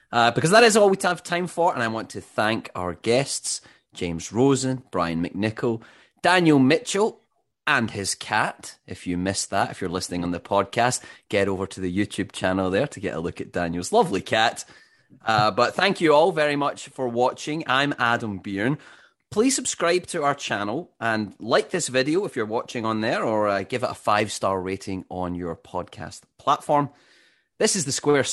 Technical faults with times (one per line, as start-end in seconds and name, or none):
none